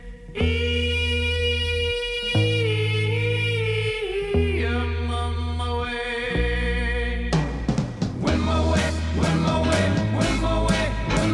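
No dropouts, distortion, noise bursts or timing errors are audible anywhere in the recording.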